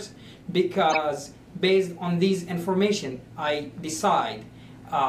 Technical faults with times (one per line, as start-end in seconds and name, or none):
0.91-0.95 corrupt frame decoded